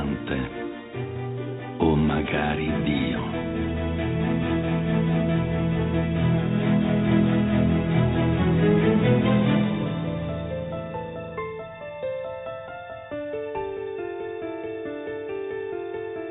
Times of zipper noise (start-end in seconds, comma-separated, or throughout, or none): none